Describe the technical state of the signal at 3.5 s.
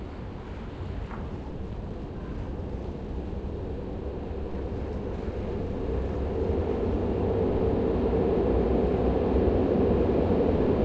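At 3.5 s the audio is inside a jitter buffer speed-up lasting from 1.16 to 3.70 s. The receiver trimmed short pitch-period slices to drain excess buffered delay, about 150 ms in all. The sound runs about 6% fast at unchanged pitch, slightly hurried.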